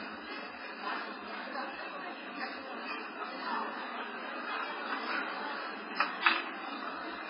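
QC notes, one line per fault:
Throughout, MP3 compression: the sound is heavily damaged, with nothing above 5.3 kHz, a hard ceiling that shows on a spectrogram as a flat horizontal edge with empty space above it. The likely cause is an MP3 encode at a very low rate, around 16 kbps, where the encoder drops the treble and zeroes weak frequency lines that blink on and off between frames, giving a watery, swirling texture, speckled holes on the spectrogram and smeared attacks in the waveform.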